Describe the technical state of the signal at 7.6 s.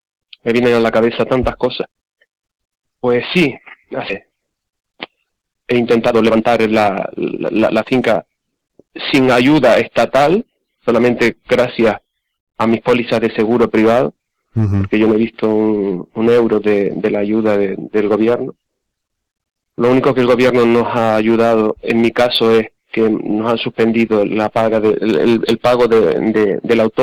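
At 7.6 s the receiver's jitter buffer is holding more audio than its target, so it is trimming short pitch-period-sized pieces again and again between 4.28 and 8.01 s, well over half a second in total. The sound plays at 120% speed with unchanged pitch and comes across as hurried.

Throughout the clip, including this moment, a stage is driven about 10 dB beyond what it can pass, so the peaks are cut flat in hard clipping, affecting around one sample in twenty. The flattened tops add high harmonics, heard as a harsh, crackling fuzz on the louder parts.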